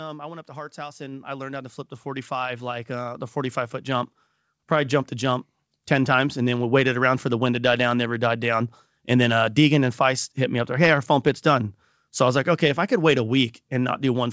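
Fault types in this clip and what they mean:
Automatic gain rising: the gain control judged the input too quiet and kept pushing its gain up, so the speech and background noise swell together by about 17 dB, climbing slowly from 0.46 s after "I went up" to 6.42 s, before "then we waited around".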